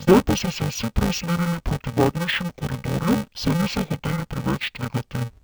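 Interleaved audio read as planar runs throughout this speech. Each 2.9 ms block, which fits a 128-sample buffer, has its alternating left and right samples split into halves, so speech sounds dull and robotic, buzzing at 345 Hz without a clear octave drop.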